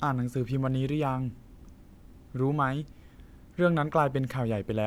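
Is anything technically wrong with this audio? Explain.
No, nothing technically wrong can be heard here.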